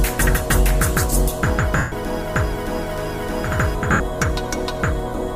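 At 1.77 s and 3.92 s, lost LE Audio frames leave 150 ms and 80 ms gaps. The decoder refills them with a noisy smear that fades.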